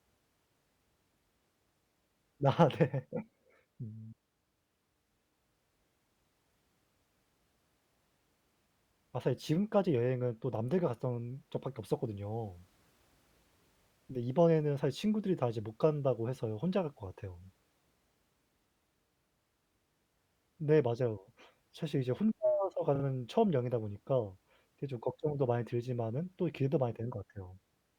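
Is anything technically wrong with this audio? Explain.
Yes. Repeated frames at 17.43 to 17.46 s and 22.95 to 23.04 s: the same stretch of coded speech is decoded again, one 20 ms block replayed once, then a 40 ms block replayed twice, heard as stutters, adding 20 ms and 80 ms.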